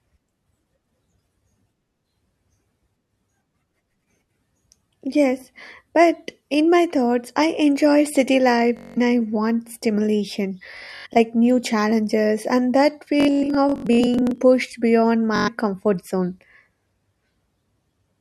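Bluetooth stutter occurs at 8.77–8.98 s, at 10.77–11.17 s after "I want stimulation", at 13.20–14.41 s after "new challenges and that", and at 15.36–15.48 s before "comfort zone". Packets arrived late or not at all, so the receiver kept replaying a tiny slice, producing a rapid machine-gun buzz. The speech then resumes further on, skipping about 0.19, 0.26, 0.62 and 0.11 s of audio.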